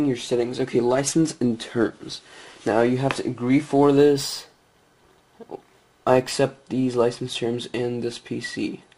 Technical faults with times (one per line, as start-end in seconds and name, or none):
3.96-6.31 imaging from linear upsampling